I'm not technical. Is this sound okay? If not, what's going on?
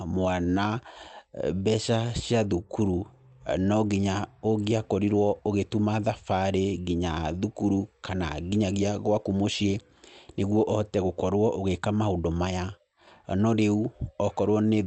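Yes, nothing in this speech recording points to a problem. It sounds like it came through an ordinary internet call, so the very top end above about 8 kHz is trimmed away, which is normal for that kind of connection.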